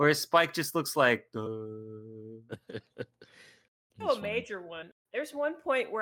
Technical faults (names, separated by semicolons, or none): compressed frames skipped